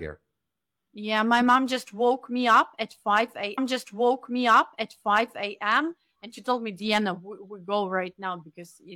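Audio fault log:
3.53–5.53 s, stream segment repeated: the player queued the same segment twice, so about 2.0 s of speech plays over again after a small blip at the jump back. The programme is delayed by that amount while the repeated stretch is heard once more.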